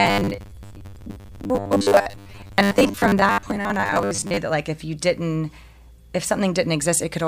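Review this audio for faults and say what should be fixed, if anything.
From 0.01 to 4.37 s the speech has a robotic sound from repeated short buffers, ending just before "that like if you". A rigid 100 Hz buzz is imposed on the speech. This fits a 10 ms block being replayed, likely because audio arrived too slowly, with about half of it repeated. Fix it by enlarging the jitter buffer or freeing the processing thread.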